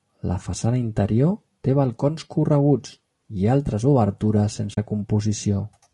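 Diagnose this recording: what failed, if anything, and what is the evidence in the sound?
Codec stage. Throughout, the speech sounds plainly rough and grainy, with noise filling the gaps between pitch harmonics and a synthetic-sounding top band. This is likely low-delay AAC compression (AAC-ELD) at a low rate, consistent with about 32 kbps. Its short frames resolve harmonics poorly and leave few bits.

Codec and network stage, AAC frame loss with muting. From 4.73 to 4.78 s the sound fades out and back in, leaving a soft-edged 40 ms hole. That fits two lost frames whose spectrum the decoder zeroed, with overlapping windows smoothing both edges.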